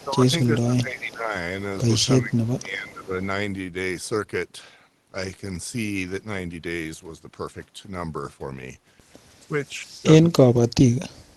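From 0.00 to 0.04 s there is an echo leak: a faint copy of the speech, far below the direct level and delayed about 363 ms, likely from a loudspeaker the echo canceller missed. It shows as a weak repeated smear on the spectrogram.

Speech suppressed in double talk, likely from the echo canceller ducking the near talker, pulls the speech down by roughly 15 dB at 0.00 to 0.32 s, 0.51 to 1.34 s and 2.20 to 3.16 s. From 9.48 s to the end, the drop is far deeper. On the waveform these are sunken envelope stretches, and on the spectrogram they are faded bands.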